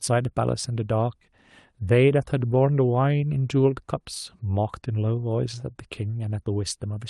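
Nothing's wrong with this speech clip: it came through an ordinary call path whose codec tops out around 12 kHz, which fits Opus, and the audio holds steady the whole way.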